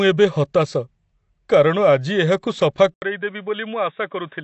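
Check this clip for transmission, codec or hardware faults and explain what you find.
Two faults are present: codec damage across the whole clip, and a drop in quality from 2.94 s onward.

Throughout, the speech has plainly audible compression damage and nothing above 8.1 kHz, which fits AAC compression, likely AAC-LC at around 32 kbps. At that rate the encoder lowers its cut-off and thins or replaces quantised bands, leaving the sound dull and smeared.

At 2.94 s the input switched to a poorer device, likely a different microphone or headset profile. An 80 ms silence marks the switch. The sound then narrows to nothing above 3.8 kHz, turns duller, drops about 5 dB and gains a new noise floor well below the speech.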